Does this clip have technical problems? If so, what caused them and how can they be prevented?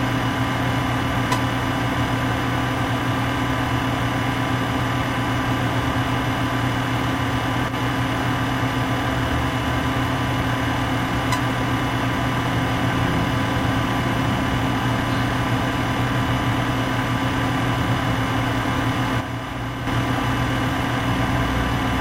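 Yes. From 7.69 to 7.74 s and again from 19.21 to 19.87 s, the sound abruptly falls by about 6 dB, then recovers. The likely cause is one channel dropping out: with one stereo side missing, the mono sum loses half of the content both sides share. Secure connectors and watch both channel meters while recording.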